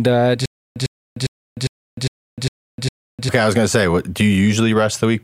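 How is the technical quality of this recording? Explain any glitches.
From 0.46 to 3.29 s the speech breaks into a stutter with silent gaps. One 103 ms fragment repeats seven times, each followed by 302 ms of digital silence, in a steady 405 ms cycle. A stalled stream likely replayed its last fragment at each retry, so the speech meant for that stretch is lost.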